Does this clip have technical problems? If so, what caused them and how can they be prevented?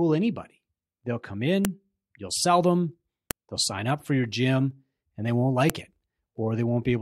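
Yes. Sharp clicks at 1.65, 3.31 and 5.70 s are a file header played as audio. Separate WAV pieces were joined with their headers intact. Those header bytes play as samples and snap. Strip headers before concatenating, keeping only the first.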